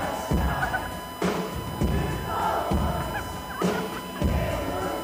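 From start to finish a steady USB whine sits at 1 kHz, fixed in pitch and loud, roughly 10 dB below the programme. The bus's 1 ms frame activity is leaking into the audio through shared power or ground, imprinting its repetition rate as a constant tone.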